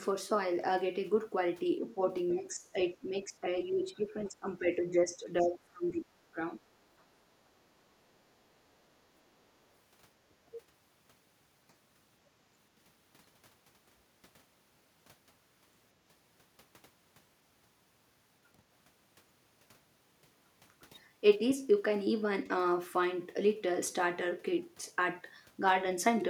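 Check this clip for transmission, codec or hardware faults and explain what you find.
The clip has three echo-canceller faults, all in the first ten seconds of speech.

Speech suppressed in double talk at 1.94, 2.39–2.75, 2.94–3.46, 3.69–6.03 and 6.25–6.39 s. The talker dips by roughly 10 to 20 dB, likely because the canceller mistook overlapping speech for echo. Unlike a network dropout, the level sags rather than falling to silence.

The other side's voice leaks through at 4.21–4.27 and 5.41–5.45 s. Faint scraps, roughly 30 dB below the talker, are likely residual loudspeaker echo. They are a second, separate voice, not a distortion of the main one.

Background is gated by the echo canceller at 9.22–9.37 s. The room sound drops by about 11 dB, then returns. The dip in the background separates this from double-talk suppression.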